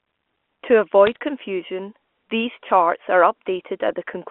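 Between 1.07 and 1.16 s, bit errors on a digital phone line put a brief burst of sharp ticks and crackle over the speech. Each flipped bit in the G.711 A-law stream corrupts one sample, suggesting a low error rate, around 0.2 percent.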